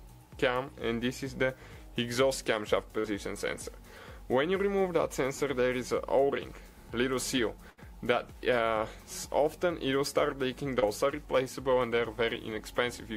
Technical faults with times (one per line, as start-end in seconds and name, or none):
2.99-3.06 burst of packet loss
7.70-7.79 burst of packet loss
10.79-10.84 short concealed packet loss